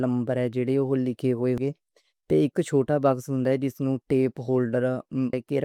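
At 1.58 s and again at 5.33 s, damaged data in the compressed stream makes the decoder misread a frame and lose sync, giving a brief glitch in the speech.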